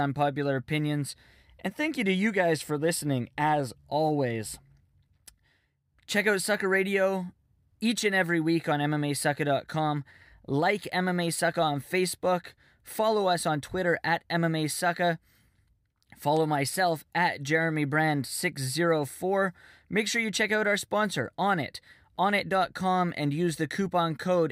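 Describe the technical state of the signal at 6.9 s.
At 6.91 s a bit error spike hits one sample: a flipped bit makes it jump to about -28 dBFS and return. It's a sharp tick, a lone waveform spike with a thin full-band spectrogram line.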